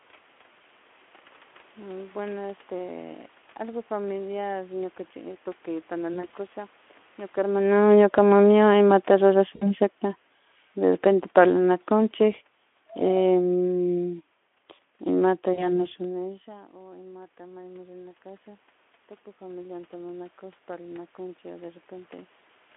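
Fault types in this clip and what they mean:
VoIP packet loss concealed by the speech codec: Speech packets went missing, and the decoder filled the gaps by extending its last pitch and filter at falling gain. This gives brief buzzy or noisy, fading patches near 6.13, 9.55 and 15.53 s, covering 60, 60 and 40 ms of lost audio.
Automatic gain falling: The gain control judged the input too loud, or its background noise too strong, and eased its gain down. The speech and room noise sink together, by about 4 dB from 7.75 to 8.37 s, then by about 6 dB from 10.78 to 14.21 s.
Automatic gain rising: Around 16 s the talker moved away, and the input dropped about 22 dB. The gain control then raised its gain slowly. Speech and background swell together by about 5 dB between 16.46 and 18.74 s.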